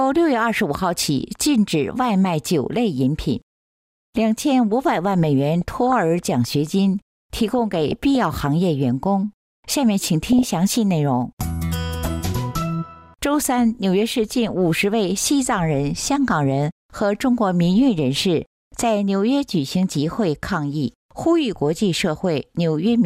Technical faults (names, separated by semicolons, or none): DAB burbling